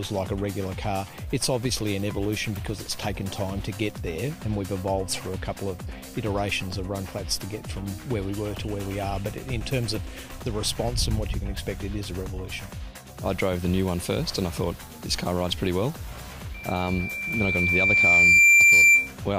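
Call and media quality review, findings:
Loudspeaker feedback squeal, 16.54–19.13 s: a 2.4 kHz tone swells over roughly two seconds to about 15 dB above the audio. Mic is picking up its own speaker, loop gain above one.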